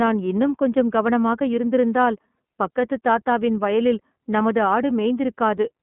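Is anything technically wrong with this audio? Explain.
Yes. Throughout, the speech sounds narrow, slightly rough and synthetic, with plainly audible coding damage and nothing above about 3.8 kHz. This is the iLBC codec: each 30 ms frame's excitation is coded independently of the last, which fits the 13.33 kbps mode, over a band of roughly 150 Hz to 3.4 kHz.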